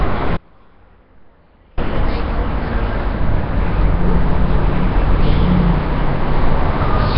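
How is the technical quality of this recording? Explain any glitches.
Technical quality is poor, with heavy codec damage throughout and a dropout near the start. Nellymoser compression is present across the whole clip: the sound is rough and hissy with a smeared, underwater blur and nothing above 5.3 kHz. That fits the likely cause, Flash's low-bitrate codec filling starved bands with noise. It is grainier than a plain low-pass.

An audio dropout to a faint residue runs from 0.37 to 1.77 s, lasting 1.4 s. The sound cuts abruptly rather than fading, leaving a faint trace about 30 dB down. The likely cause is the signal being lost while the path stayed live, which is why it isn't dead silence.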